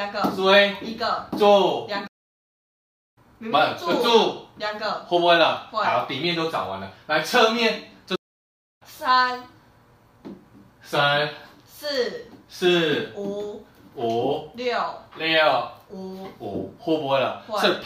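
Playback stalls at 2.07 s and 8.15 s. The sound cuts to silence for about 1.1 s, then 0.65 s, and resumes. The player likely ran short of data.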